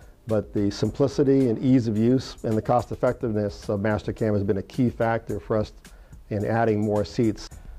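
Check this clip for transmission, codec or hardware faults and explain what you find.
No transmission, codec or hardware faults turn up in this clip.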